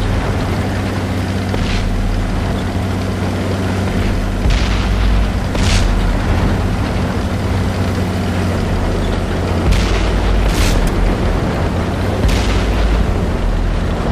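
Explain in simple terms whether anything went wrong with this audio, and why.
Nothing went wrong; no problems can be heard anywhere.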